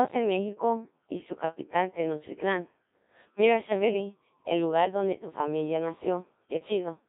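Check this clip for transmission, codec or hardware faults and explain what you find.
There's one codec fault, and it runs the whole way through the speech. Codec 2 vocoder: the voice is rebuilt from sine waves using just pitch, voicing, energy and a spectral envelope, squeezed into roughly 200 Hz to 3.7 kHz and fitting the 1.3 kbit/s mode. Since the original waveform never survives, the speech comes out heavily robotic and buzzy.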